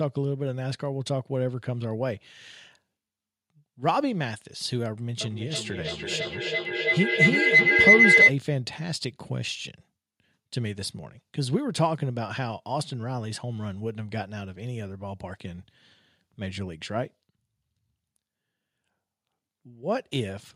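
From 5.21 to 8.36 s, a feedback howl near 2 kHz builds, pulsing about every 300 ms. It peaks about 12 dB above speech, growing rather than fading like echo.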